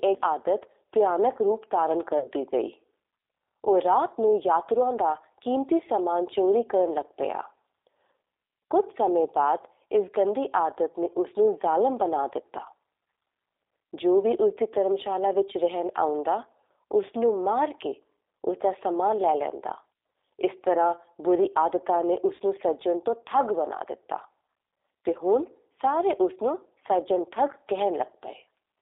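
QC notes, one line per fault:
Throughout: G.729 codec at 8 kbit/s, with sound confined to roughly 300 Hz to 3.7 kHz. Plainly rough, synthetic speech, rebuilt from a filter, a pitch predictor and sparse pulses.
2.19–2.30 s and 22.35–22.41 s: VoIP packet loss concealed by the speech codec. In each, about 40 ms is missing, which fits two lost 20 ms packets. The decoder stretches the last pitch and filter into a fading buzzy tone or coloured noise, and the speech stays weak or distorted briefly afterward.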